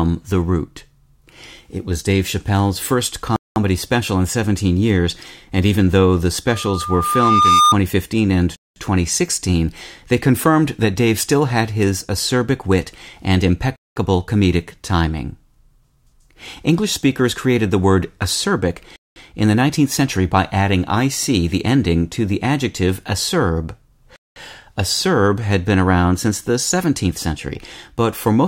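At 3.36 s the speech drops out for 200 ms, a hole with abrupt edges on both sides. This is a gap between chunks: the audio was delivered in 5-second blocks, and silence was inserted at a join instead of the next block following seamlessly. Nothing is missing from the speech, but the flow is cut.

From 6.47 s to 7.75 s a loudspeaker feedback squeal appears. A steady 1.2 kHz tone rises over about a second until it sits about 5 dB above the speech. The microphone was picking up the loudspeaker it fed, and at 1.2 kHz the loop gain went above unity, so that frequency kept reinforcing itself.

The same 200 ms gap between chunks recurs at 8.56 s, 13.76 s, 18.96 s and 24.16 s, once every 5.2 seconds (a 5-second chunk plus the gap). Each one is the same hard-edged silence.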